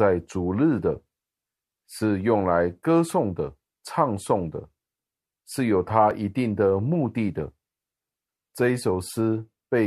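At 6.11 s, an overlap between stream segments makes the player discard about 16 ms of speech it wrongly treated as duplicated, causing a tiny skip.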